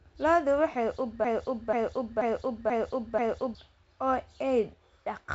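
At 1.25 s the speech catches on a fragment of about 485 ms and repeats it. The same piece plays five times, back to back, with no gap. The loop releases at 3.55 s. This is a broken-record loop. The likely cause is a player or stream that stalled and kept resending the last block it held. The speech that belonged in those 2.3 seconds never arrives. Throughout, the audio stops near 7.7 kHz, which fits G.722 wideband telephone coding.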